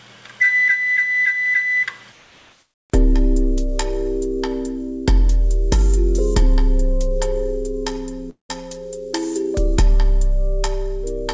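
Comfort noise in place of the background runs from 2.12 to 2.90 s. For about 0.78 s the real background, which sits about 60 dB below the loudest passages, gives way to a smooth, featureless hiss about 2 dB quieter. This is likely discontinuous transmission: the sender's activity detector stopped sending audio, and the receiver synthesised noise shaped roughly like the background until the sound resumed.

A long network dropout follows at 8.30 to 8.51 s. About 0.2 s of audio likely never arrived. The receiver stretched the last sound into a fading buzz, then left about 0.13 s of near-silence. When the audio returns, the missing stretch is simply gone. Throughout, the band-limited call codec, which fits G.722, leaves nothing above 8 kHz.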